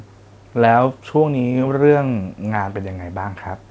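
No technical faults are audible.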